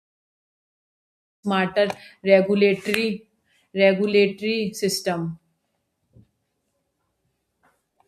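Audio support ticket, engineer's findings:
Nothing stood out on listening to this speech clip, and the smooth fade-in around 1.5 s rises evenly with no click or hard edge.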